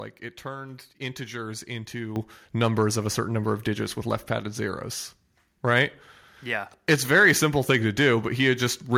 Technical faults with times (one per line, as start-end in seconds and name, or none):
2.16 microphone volume stepped up